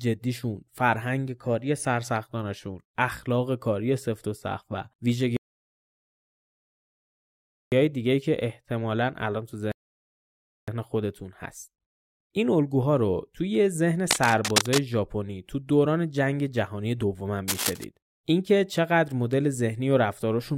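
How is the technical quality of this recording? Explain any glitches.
The recording has two kinds of glitch: playback stalls early on and scratchy noise bursts later.

Rebuffering stalls at 5.37–7.72 s and 9.72–10.68 s cut the speech to silence for about 2.35 s and 0.96 s. The player ran out of downloaded audio and waited. Unlike a dropout, speech resumes exactly where it stopped, so nothing is lost and only time is added.

Cable scratch noise appears at 14.11–14.82 s, at about the level of the speech, and at 17.48–17.84 s, about 5 dB below it. It is likely a worn cable or connector being moved. Unlike steady hiss or isolated clicks, it is a dense, uneven rustle lasting only a moment.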